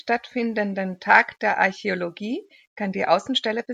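No technical fault can be heard anywhere in this speech recording; the signal stays intact and continuous throughout.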